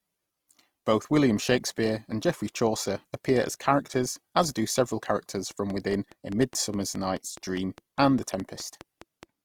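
Throughout the speech, the audio carries the damage of a low-bitrate encoding that was likely saved again at a high bitrate, which fits a speech codec running near 24 kbit/s followed by a generous MP3 stage around 192 kbit/s. This is low-bitrate audio saved at a high bitrate: the second, roomier encode could not restore what the first one had already thrown away. The codec artefacts from that first pass remain audible, and the larger file restores none of it.

From 5.51 s to 9.24 s, a train of clicks runs over the speech. Something is likely injecting a pulse into the signal at a steady rate, such as interference from nearby equipment or a faulty connection or power supply. About twenty near-identical clicks arrive evenly at roughly 4.8 per second and peak about 5 dB above the speech. The result is a regular ticking that sits on top of the voice and stays audible in the pauses.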